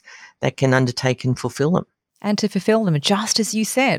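Nothing in this speech recording registers as a technical fault.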